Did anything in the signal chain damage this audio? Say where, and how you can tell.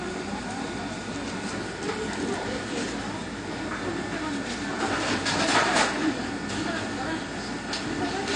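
Yes. The codec stage likely did it: AAC compression at a low bitrate, consistent with AAC-LC near 32 kbps. The quantiser starved the spectrum, cutting everything above 9.8 kHz for the whole clip, so the sound is dull and smeared, with plainly audible warbling or fizzy artefacts.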